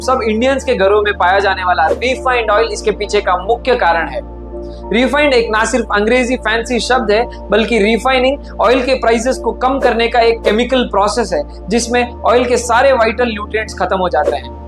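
No technical faults are audible.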